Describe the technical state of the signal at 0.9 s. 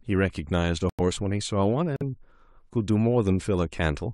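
At 0.9 s, corrupted compressed frames were rejected by the decoder and the player muted them: a corrupt frame muted fault from 0.89 to 1.01 s. The speech drops abruptly into silence for about 0.11 s, a gap that fits about four consecutive frames, and timing stays intact.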